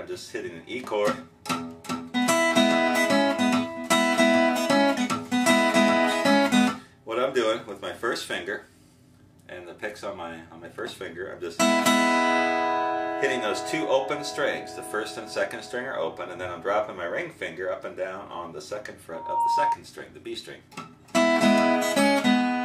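From 19.14 to 19.78 s a single tone near 937 Hz swells up over about a third of a second into a squeal, reaching roughly the same level as the surrounding sound before it stops. This is loudspeaker feedback squeal: a microphone was picking up the loudspeaker it was feeding, and at 937 Hz the gain around that loop exceeded one, so the tone reinforced itself on each pass until the loop was broken.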